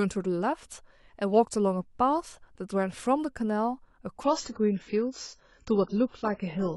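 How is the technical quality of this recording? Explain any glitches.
The recording has one fault, a sudden drop in quality over its final stretch. An adaptive stream at a lower bitrate takes over from 4.24 s to the end at 6.76 s. The player switched versions without a gap, which fits a move from about 96 to 16 kbit/s. The speech loses everything above 7.7 kHz, sounding duller and more smeared.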